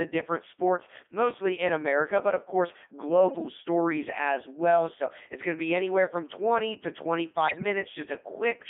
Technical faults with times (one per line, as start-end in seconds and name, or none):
0.00-8.70 Codec 2 vocoder
7.48-7.64 bit errors on digital voice radio